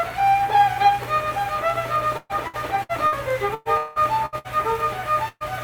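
The audio breaks up twice with repeated packet loss, giving a robotic sound. From 2.17 to 3.15 s several gaps are patched by repeating the last sound, longest 120 ms, covering about 30% of the stretch. From 3.54 to 4.47 s it worsens: about 45% concealed, longest gap 184 ms. Audio is missing each time. A burst of packet loss follows at 5.28 to 5.43 s. About 120 ms is lost and filled by continuing the last sound while it fades. The final 30 ms goes silent before the audio resumes further on.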